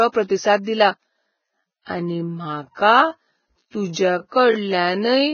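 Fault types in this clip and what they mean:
Vorbis compression: The speech sounds hissy and grainy, with nothing above 6.5 kHz. This heavy damage is likely from low-bitrate Vorbis coding, around 16 kbps.
Pre-echo: A short hiss comes just before sharp attacks at 0.63, 1.82, 3.93 and 4.28 seconds. Block-spread quantisation noise smears each attack, lasting 30 to 48 ms.
Time-stretched section: After "प्रतिसाद दिला" at 1.07 seconds, the pace abruptly slows to about 0.55 times speed while pitch stays. The speech drags, likely from stretching software.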